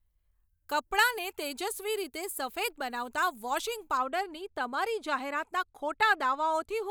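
From the start to 3.97 s the speech sounds thin, bright and hissy on sibilants, with the top end about 11 dB hotter at 10 kHz than at 1 kHz. This is pre-emphasis left on: a treble boost, which fits a 50 µs FM curve, never received its matching de-emphasis cut.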